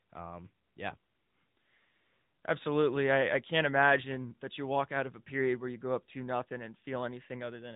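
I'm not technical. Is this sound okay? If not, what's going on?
No, the whole clip has gone through the AMR narrowband mobile codec, the squeeze old phone networks use. Everything above about 4 kHz is gone, so the speech sounds muffled and boxy, with a clearly buzzy, slightly synthetic edge from rebuilding the voice in tiny slices.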